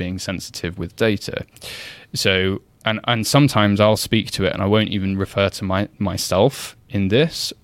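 No technical faults can be heard anywhere in the speech recording. Nothing in it calls for a timestamp or an account of something going wrong.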